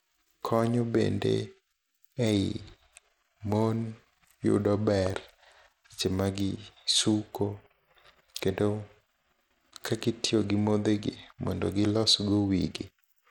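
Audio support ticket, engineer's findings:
Treble flickering and dropping out across the whole speech clip, with gritty noise and aliasing riding on the sound. Likely Bluetooth SBC compression at a starved bit pool, consistent with roughly 96 kbps; upper sub-bands get few bits and are coarsely quantised.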